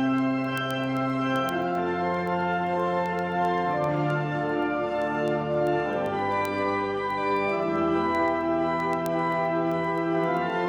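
A digital link feeding the receiving device was read on a clock not locked to the sender's. The two clocks drift apart by roughly 200 parts per million, so one sample is dropped or repeated each time they slip past each other. The result is word clock ticks: sharp clicks of uneven strength, recurring about every 0.15 s from 0.18 s to 10.63 s, around seventy of them across the audio.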